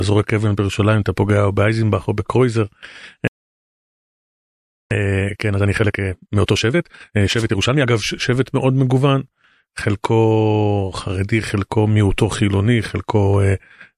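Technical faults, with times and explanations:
3.28–4.91 s, playback stall: The speech stops mid-flow and the output stays silent for about 1.63 s before the sound resumes. A gap of this length with no fade or noise in it points to the player having run dry of buffered data or having its output thread held up. The likely cause is a buffer underrun or a blocked playback thread.
4.91–7.91 s, time-compressed catch-up: For three seconds after the stall the speech runs at about 1.5 times normal speed with its pitch unchanged, so it sounds hurried rather than higher. The player is working off the backlog from the stall by dropping short slices of audio and cross-fading across the joins.
6.46–6.48 s, pre-echo: During the catch-up, a sharp attack is preceded by a burst of hiss about 21 ms long, sitting about 16 dB above the quiet just before it, and the attack sounds blunted. The codec spread the quantisation noise sized for the loud onset across a whole transform window of about 36 ms. 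It never switched to short blocks for this transient, so the noise leaked into the quiet lead-in.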